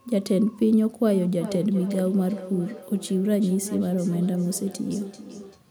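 From 1.13 s to 5.64 s the speech picks up feedback echo between two devices. One device plays what the other's microphone sent, and that microphone catches it and sends it back. Each word returns roughly every 0.4 s, thinner and ringier, peaking about 12 dB below the speech.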